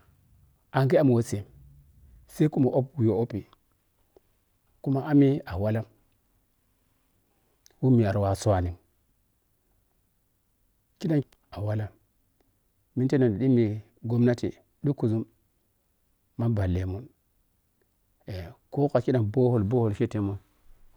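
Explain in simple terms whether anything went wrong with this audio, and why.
Nothing went wrong here: the speech recording shows no audible technical faults anywhere in its run.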